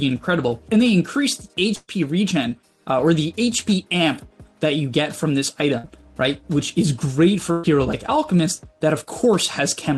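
Packets were lost in bursts at 1.75 to 1.91 s, 5.78 to 5.87 s and 7.52 to 7.67 s. Each burst of packet loss is concealed by stretching and fading the last sound into a brief held buzz or hiss, before the audio jumps ahead past roughly 120, 60 and 120 ms.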